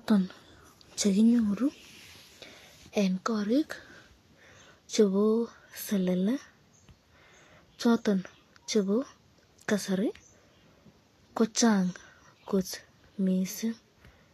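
From start to finish, the speech carries plainly audible coding damage, likely from Vorbis compression. Nothing is present above 14.2 kHz. The treble below that edge sounds hissy and grainy. Consonant onsets are blurred, and sustained tones have a rough, noisy texture. At low quality the encoder spends too few bits on the high bands, so fine detail is replaced by noise of similar energy. The degree of damage fits a bitrate around 35 kbps.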